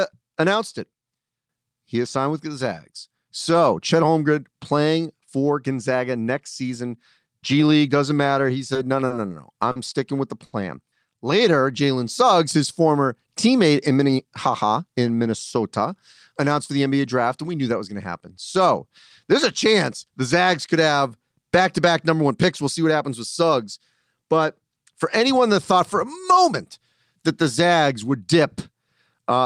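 At 8.73, 9.07, 9.72 and 10.46 s the speech briefly hangs on a sound with a faint buzz or dip, growing from 20 to 70 ms. Each is a short stall from a late packet: the jitter buffer ran empty and the last sound was stretched until the packet arrived. From 11.51 to 11.99 s the speech drags slightly at unchanged pitch, running at 94% speed. This is a jitter buffer slow-down, where repeated pitch periods added 36 ms to rebuild the reserve. From 13.94 to 14.79 s the speech sounds hurried at the same pitch, running at 109% speed. This is a jitter buffer speed-up, where short trimmed pieces removed about a tenth of a second of excess delay.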